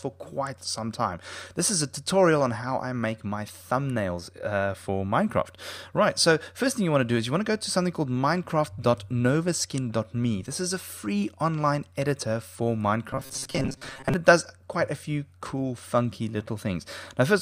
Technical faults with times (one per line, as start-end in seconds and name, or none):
13.11-14.14 robotic sound from repeated short buffers